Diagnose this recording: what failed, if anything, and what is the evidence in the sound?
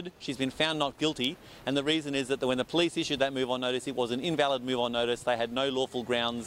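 Nothing failed, and the sound holds no evidence of a fault at any stage of the chain.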